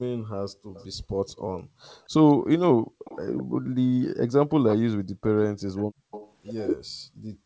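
From 0.49 to 1.81 s the background is gated by the echo canceller: the room tone drops by up to about 34 dB, in pieces totalling roughly 0.7 s, while the loudspeaker plays. On a waveform the noise floor collapses to near silence between bursts, and on a spectrogram it shows as blank vertical gaps.

Inside that stretch, at 0.74 to 0.86 s, a faint echo leak appears. It is a copy of the far-end sound trailing by 214 ms, about 25 dB below the speech, which is likely residual echo that the canceller failed to remove. A longer leak runs from 1.82 to 3.43 s at about 20 dB down, and on a spectrogram it looks like a dim duplicate of the speech contours shifted right by 214 ms.

The gating returns from 2.75 to 3.66 s, dipping the background by up to about 36 dB for roughly half a second in total.

Another short leak comes at 4.68 to 4.76 s, louder at about 15 dB below the speech. Immediately after it, at 4.83 to 4.87 s, the talker's own speech is suppressed in double talk. 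It is cut by roughly 40 dB for about 40 ms, most likely because the canceller mistook local speech for echo while both sides were talking. This shows as a thin notch through the waveform and a narrow full-band blank on the spectrogram.

From 5.15 s to the end the background is gated again, dropping up to about 37 dB. Within that section, from 5.77 to 6.32 s, a further echo leak sits at about 15 dB below the speech, with the same 214 ms lag.

Across the whole clip the spectrogram stops at 8 kHz. This comes from the call path, which is consistent with a G.722 codec at 64 kbps.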